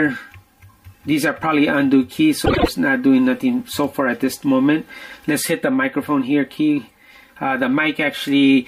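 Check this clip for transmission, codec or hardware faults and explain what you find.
One transmission fault: a stretch of frames arrived out of order.

Frames out of order, 2.45 to 2.68 s. Two adjacent blocks of coded audio, each about 78 ms long, reached the decoder swapped and were decoded that way. Each block fits about three frames. The segment's two halves play in reverse sequence, so the sound there becomes a brief garbled flutter. Nothing is missing, and the timing around it is intact.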